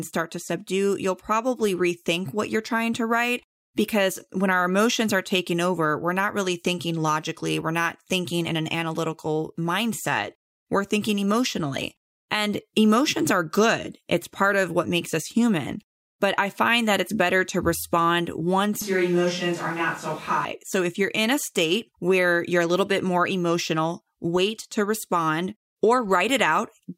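Speech, and just after "it's better to respond" the sound turns abruptly roomy and hollow, losing bass, with background noise rising to about 25 dB below the speech, from 18.82 to 20.45 s. The level barely changes. It is likely a switch to a distant microphone.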